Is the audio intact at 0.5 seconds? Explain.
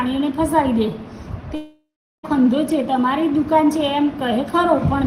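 Yes, at 0.5 seconds the audio is intact, with no dropout, click, distortion or other fault at that point.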